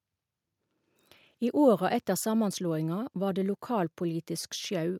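Nothing stood out as a technical problem at any point while listening to the speech in this recording.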